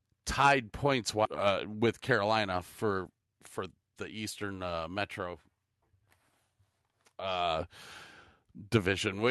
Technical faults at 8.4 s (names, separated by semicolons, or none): none